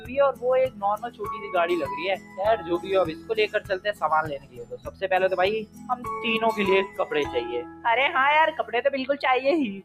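The audio pumps and thins out across its whole length, with sustained parts and decaying tails sinking while sharp onsets come through near full level, a swing of around 15 dB. This is a noise suppressor applied to music or sounds: a processor built for speech treats steady content and ambience as noise and pulls it down. Sound is cut by the noise suppressor most clearly from 0.0 to 1.51 s (drops of about 15 dB), 2.16 to 4.02 s (about 14 dB), 4.38 to 5.05 s (about 16 dB), 5.62 to 6.07 s (about 15 dB), and more briefly at 6.87 to 7.04 s and 7.63 to 7.85 s (about 10 dB each). In each span the suppressor judged the held sound to be noise and attenuated it more than the surrounding material.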